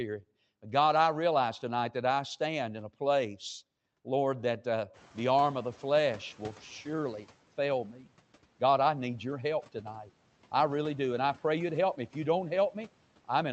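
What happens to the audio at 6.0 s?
At 6.0 s the noise suppressor is catching up, from 4.93 to 7.27 s, just after "that uh". Room noise jumps by about 19 dB around 5 s, and the suppressor's estimate lags. The noise leaks through lightly reduced, then sinks by about 8 dB before "fail me".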